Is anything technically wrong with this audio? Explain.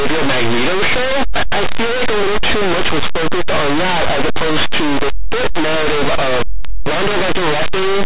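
Yes. For the whole clip, the speech suffers linear audio read as companded. Plain linear 8-bit samples were decoded as mu-law codes, so small values just to one side of zero become maximal outputs. This produces very loud, harsh distortion, far louder than the faint grain of ordinary 8-bit audio.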